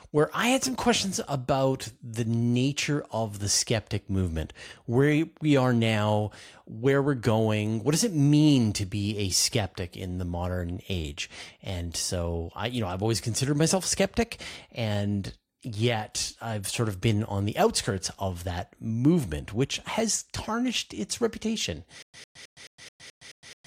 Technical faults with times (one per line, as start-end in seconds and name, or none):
22.02-23.66 stutter with silent gaps